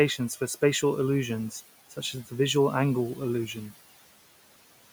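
Noise suppressor artifacts run through the whole clip. The suppressor estimates the steady room noise, sitting about 19 dB below the speech, and pulls those bands down by about 17 dB frame by frame, so the background sinks in the gaps and rises back under each phrase.

Between 1.9 and 2.32 s, after "for spatial illusions" and before "visual angle illusion", there is speech cut by the noise suppressor. It mistook low-level speech for noise and attenuated it by up to about 11 dB for roughly 150 ms in total, leaving those sounds swallowed and faint.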